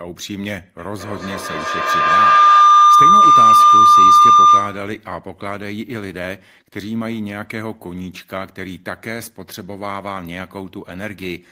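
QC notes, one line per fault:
0.79–5.01 s, feedback howl: a tone near 1 kHz builds out of the speech and peaks about 16 dB above it, pulsing roughly every 200 ms. A loudspeaker is feeding the microphone on the same call with more than unity loop gain, so each pass around the loop comes back louder. The loop's frequency response narrows the growing repeats to one dominant ring, and the loop delay sets the pulse rate. The howl stops at 5.01 s when the loop is broken.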